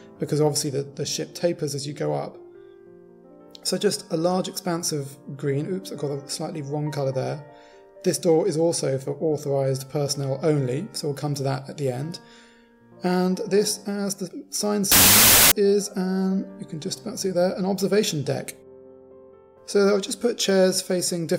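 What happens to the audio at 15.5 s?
At 15.5 s the clip is at the end of a wrong sample width fault spanning 14.92 to 15.52 s. Audio stored as 32-bit integers is read as 16-bit, so each sample splits into two values: the upper half carries the signal, while the lower half becomes loud noise. The result plays at half speed, an octave down, which distinguishes it from a byte-order error, where speed and pitch stay correct.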